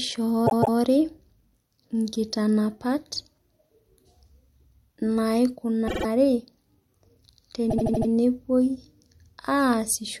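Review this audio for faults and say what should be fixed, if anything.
There are three stutters from repeated frames, where the decoder plays the same stretch of compressed audio back-to-back. From 0.46 to 0.77 s, a 157 ms chunk plays twice more. At 5.87 to 6.05 s, a 52 ms chunk repeats three extra times. From 7.69 to 8.09 s, a 78 ms chunk comes back five more times. Together they pad the speech by roughly 0.86 s. To prevent this, check the writer or transport for retries that resend frames, and deduplicate by frame sequence number before decoding.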